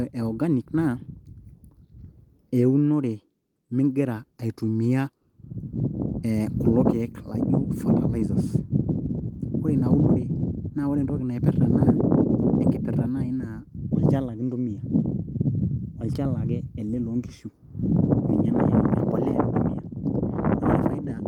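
No technical faults can be heard anywhere in the recording.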